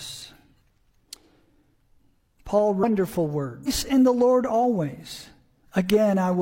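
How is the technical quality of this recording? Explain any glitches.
Technical quality is marred by two short glitches from damaged data in a compressed stream. They fall at 2.79–2.84 s and 3.63–3.68 s. Each is a brief squawk or blip. Corrupted bytes there make the decoder misread frames and lose sync until it finds the next frame header.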